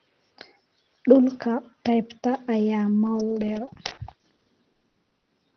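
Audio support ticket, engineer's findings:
Choppy, robotic speech 3.05–5.29 s: repeated packet loss, many short dropouts up to 100 ms, about a quarter of the span concealed by extending prior audio, over the 6 kHz band-limited call codec.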